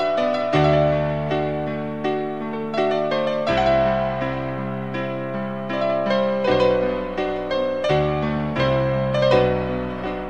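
Listening closely from beginning to end, nothing in the audio stood out as a technical problem.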